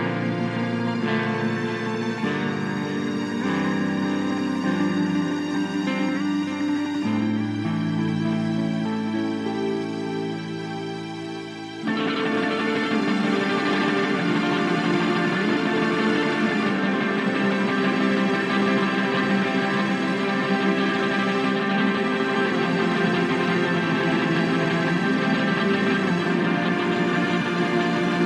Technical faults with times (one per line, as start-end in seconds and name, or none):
none